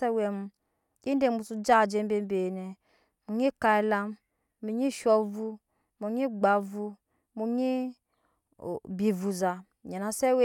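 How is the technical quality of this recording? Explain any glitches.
No glitches or technical faults can be heard here.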